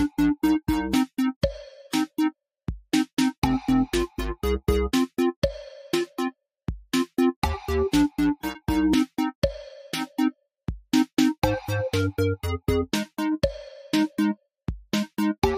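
There are no technical faults to describe at any point in the audio.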